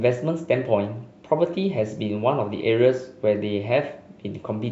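A short bit of speech, and there's nothing technically wrong to flag anywhere in it.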